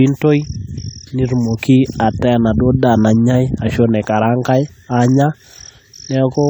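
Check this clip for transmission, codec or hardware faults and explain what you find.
One codec fault runs through the whole clip. Generation loss: the speech sounds swirly, smeared and hollow, with blurred attacks, likely from around seven repeated re-encodes, consistent with a 64 kbit/s AAC-LC chain.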